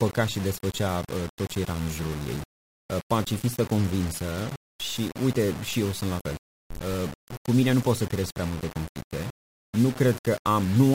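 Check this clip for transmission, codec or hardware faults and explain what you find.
One fault runs through the whole clip: low bit depth without dither. The speech has a grainy distortion that shifts with the voice. Quiet passages turn gritty and the softest moments sputter or drop out. The error sits only about 15 dB below the signal. This likely comes from rounding to roughly 5 bits with no dither, so the error tracks the waveform.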